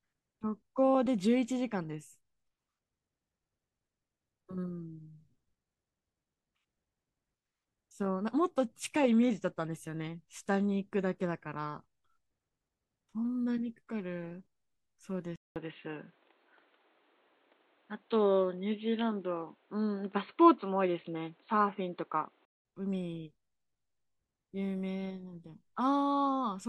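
From 15.36 s to 22.65 s the input likely switched to a poorer device. After a 0.2 s silence, nothing above 4.3 kHz remains, so the speech turns dull and boxy, shifts level by a few decibels and gains faint new background noise.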